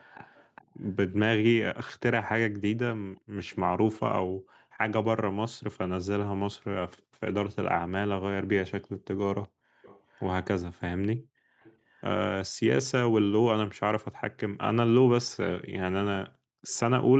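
A far-end echo canceller likely let some of its loudspeaker pickup back into the call. The result is echo leak: a faint copy of the speech trailing by 374 ms at 0–0.91 s, 3.17–3.21 s, 6.97–7.02 s, 9.43–9.48 s, 9.82–10.22 s and 11.61–12.01 s, about 25 to 40 dB below the speech.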